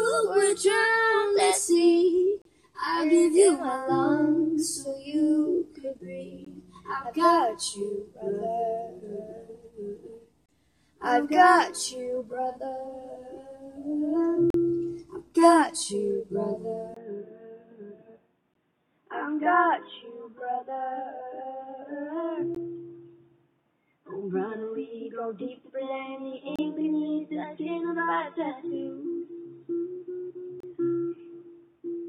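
Short holes of hard-edged silence cut into the sound at 2.42–2.45 s, 6.45 s, 10.46–10.49 s, 14.50–14.54 s, 18.54 s, 22.55 s, 26.56–26.59 s and 30.60–30.63 s, each lasting from about 16 to 39 ms. These are gaps between stream segments. Consecutive 4-second segments are timestamped slightly apart, and the player fills each space with silence. Unlike a packet dropout, nothing is missing. The sound resumes exactly where it stopped, only pushed later, and the steady four-second spacing gives the cause away.

At 16.94 s, after a 20 ms silence, the sound turns dull and boxy and stays that way to the end. Nothing is left above 3.7 kHz, the level falls by roughly 5 dB, and a new noise floor appears about 50 dB below the signal. The input was likely switched to a poorer device. A simple low-pass filter would not explain the change, because it would bring neither the break at the switch nor the different level and background noise.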